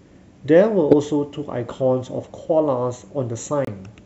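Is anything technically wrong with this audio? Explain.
Yes, there are two spots where a corrupt frame was decoded in this speech: 0.91 to 0.93 s and 3.65 to 3.69 s. Each time, a couple of compressed frames had flipped bits and the decoder played them anyway, so misread gains and codes dropped energy into the wrong frequencies for roughly those frames' length. You hear a short chirp, squeak, blip or burst of noise. The first one's pretty loud. The second is quieter.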